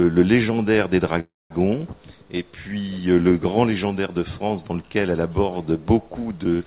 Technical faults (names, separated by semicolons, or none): call audio freeze